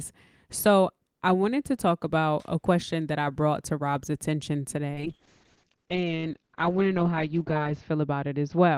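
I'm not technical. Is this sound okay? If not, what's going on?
No. From about 4.96 seconds to the end, the speech turns rougher and more muffled. This is a call bitrate drop: the connection judged it had less room, so the app squeezed the sound into far less data, discarding detail and the crisp top end above about 8 kHz. It stays at its worst for about 2.8 seconds. Unlike a dropout, nothing goes silent or skips; the sound keeps flowing, just at lower quality.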